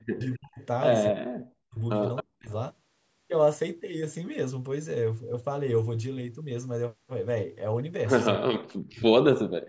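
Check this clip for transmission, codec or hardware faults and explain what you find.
Two call-path faults show up, both concentrated in the first two and a half seconds, with one more near the end.

Speech suppressed in double talk occurs from 0.0 to 0.6 s, 1.11 to 1.79 s, 2.22 to 2.5 s and 8.39 to 9.41 s. The speech sinks by up to about 40 dB. This is likely an echo canceller that heard both sides talking at once and turned down the near talker along with the echo. The level itself is attenuated, and no extra voice appears, which separates it from a leak.

Echo leak appears at 0.21 to 0.37 s, 0.61 to 0.66 s and 2.16 to 2.23 s. Each is a copy of the speech trailing 267 ms behind it, at roughly 25, 40 and 15 dB below the speech. The cause is likely a loudspeaker-side canceller letting part of its microphone pickup return. The fixed 267 ms lag tells it apart from room reverberation, which smears continuously instead of repeating as discrete delayed scraps.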